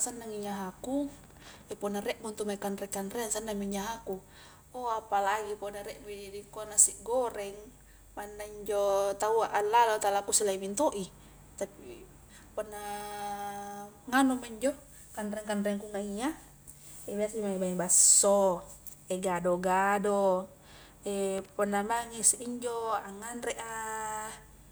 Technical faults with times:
1.24-1.72 loose connector crackle
21.38-21.49 loose connector crackle

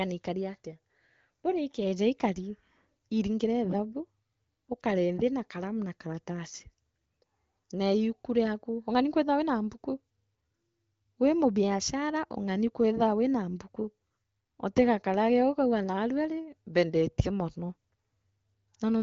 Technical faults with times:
none

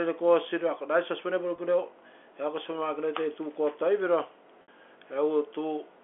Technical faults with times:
1.56-1.58 packet loss with pitch repetition
4.62-4.68 packet loss with pitch repetition

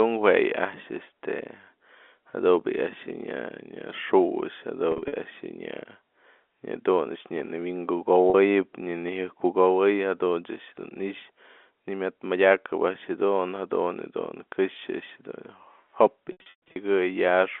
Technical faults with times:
4.92-5.12 packet loss with pitch repetition
8.30-8.34 packet loss with pitch repetition
16.32-16.76 packet loss with pitch repetition

